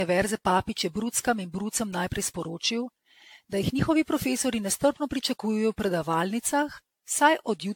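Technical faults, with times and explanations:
throughout generation loss: swirly, hollow speech with smeared attacks, likely from repeated lossy re-encoding around ten times, which fits AAC near 96 kbit/s; spectrogram shows nothing above 18.6 kHz.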